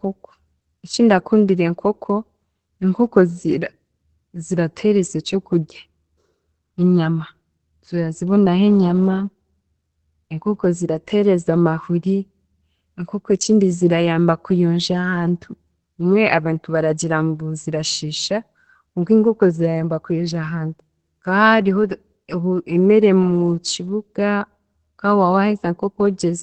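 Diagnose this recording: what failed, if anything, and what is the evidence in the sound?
The failure sits at the codec stage, most likely Opus compression running in its speech-oriented mode at a very low rate, consistent with roughly 12 kbps. Throughout the clip the speech is band-limited, with nothing above about 8.6 kHz, so sibilants and breath detail are cut off. With too few bits for fine spectral detail, the encoder models the signal coarsely, and heavy damage results: the speech sounds muffled and hoarse rather than crisp.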